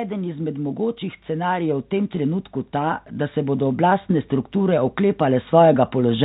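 From about 0.08 s right through to the end at 6.24 s, you can hear automatic gain rising: the gain control decided the input was too quiet and kept nudging its level up. Since it's a gain change on the whole signal, the speech and the room noise behind it swell together, so the background creeps up as the voice gets louder, all heard through the narrowband call path that tops out around 4 kHz.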